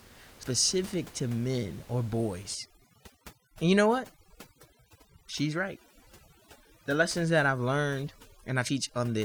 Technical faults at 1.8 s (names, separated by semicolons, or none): none